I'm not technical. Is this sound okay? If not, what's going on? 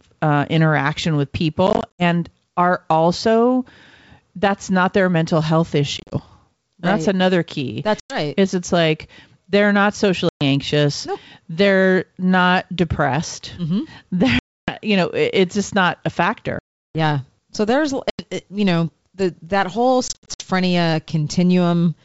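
No. The speech has packet loss on an ADPCM call: pieces of the audio go missing and drop to silence at 1.67–2.03, 5.98–6.16, 8.00–8.18, 10.29–10.43, 14.39–14.72, 16.59–16.97, 18.10–18.24 and 20.08–20.45 s. Each time, the receiving end loses track of the sender, so the speech comes back with a click, slight distortion or the wrong loudness before settling.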